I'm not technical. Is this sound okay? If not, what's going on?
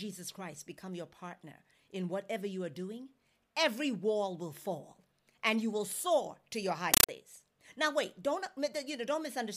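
No. Just after "soar to your high", from 6.94 to 7.09 s, a Dolby Digital stream was played as ordinary sound instead of being decoded: a compressed stream played as audio. The speech turns into loud, chattering static, bursts about 31 times a second.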